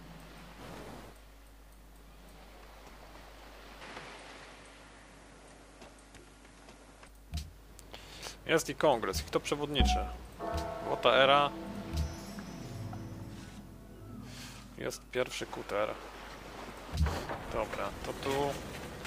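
From 3.81 to 7.08 s the sound turns duller, with a modest level shift and a faint new noise floor, and no gap at either switch. The likely cause is an input switched to a poorer device. A spectrogram shows content cut off above 11.6 kHz for that stretch.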